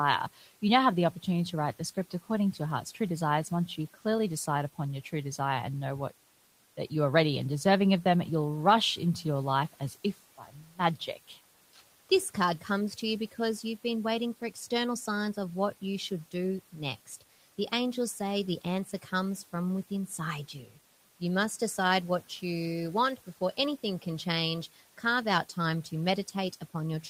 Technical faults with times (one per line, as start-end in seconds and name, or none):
10.38-10.79 speech cut by the noise suppressor